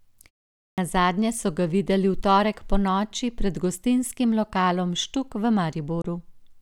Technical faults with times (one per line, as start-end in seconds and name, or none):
0.71-0.78 clipped start after a pause
6.01-6.05 Bluetooth dropout